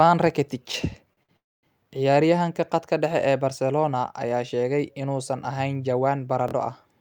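At 0.72 to 0.74 s there's a repeated buffer: a roughly 23 ms chunk plays one extra time with a hard join, a quick stutter that fits a 1024-sample buffer running dry. At 1.13 to 1.19 s and again at 1.23 to 1.31 s you get a short stall from a late packet each time; the sound is held on for 36 ms, then 56 ms, and nothing's lost. From 1.37 to 1.65 s comes a call audio freeze, likely from packets held up on the way: the sound trails off and sits silent for about 250 ms before picking up where it left off. Right after "sheegay inuusan ahayn jawaan", at 6.48 to 6.53 s, another repeated buffer hits, with the same 23 ms piece played twice extra for a stutter.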